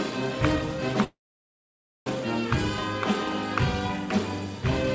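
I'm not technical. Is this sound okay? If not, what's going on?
No. Call audio freeze, 1.04 to 2.09 s: the sound stops for about a second, then resumes exactly where it left off, likely because network packets arrived late.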